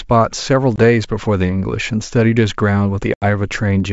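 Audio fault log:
0.76–0.79 s, packet loss on an ADPCM call: a 20 ms hard-edged silence, roughly one packet; the decoder's predictor and step size lose track, so speech resumes slightly distorted.
3.14–3.24 s, packet loss on an ADPCM call: an 80 ms gap, about four packets dropped; afterwards the mismatched adaptive state gives distortion for some tens of milliseconds before settling.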